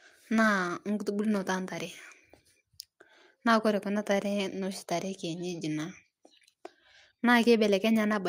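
Nothing in this recording points to a technical fault, so there's nothing here to walk through.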